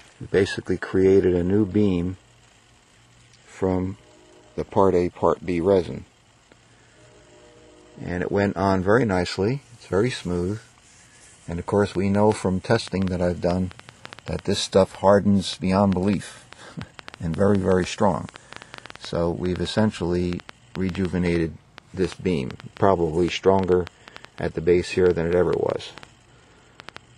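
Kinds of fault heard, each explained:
Train of clicks: from about 12.0 s almost to the end, roughly five clicks a second at an uneven pace, about seventy in all, similar in shape and poking out around 10 dB above the sound, likely from nearby equipment interference or a faulty connection.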